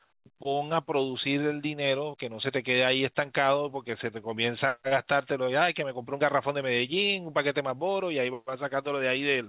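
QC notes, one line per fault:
The speech carries the narrow telephone bandwidth of the call path, with nothing above 4 kHz, which fits G.711 A-law at 64 kbps, and no faults are present.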